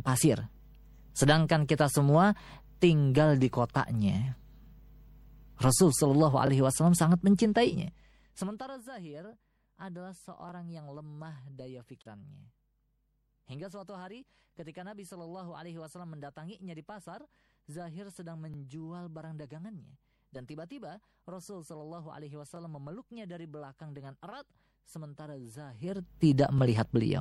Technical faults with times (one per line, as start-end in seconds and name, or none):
0.00-27.21 MP3 compression
2.45-2.47 overlapping chunks
6.47-6.49 overlapping chunks
10.49-10.51 overlapping chunks
12.02-12.08 damaged data in a compressed stream
14.51-14.54 overlapping chunks
18.54-18.56 overlapping chunks
22.56-22.58 overlapping chunks
25.69-26.18 zipper noise
26.58-26.61 overlapping chunks